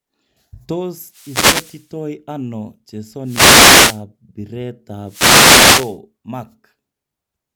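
Three wireless microphone noise hits occur in this speech, at 1.04 to 1.93 s, 3.23 to 4.03 s and 5.04 to 5.99 s, each lasting just under a second. In each, the analogue FM radio link fades as reflected signal paths cancel the direct one, so the receiver's own noise rises into the audio. Each is heard as a brief swish or burst of static laid over the talker.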